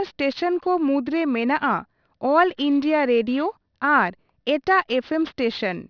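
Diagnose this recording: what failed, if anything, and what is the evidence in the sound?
Sibilants sound gritty and metallic for the whole clip, with faint false tones, roughly 30 dB below the speech, folding back under a hard band edge near 5.5 kHz. This is aliasing at the sample-rate conversion stage: a drop from 48 kHz to about 11 kHz without an anti-alias filter.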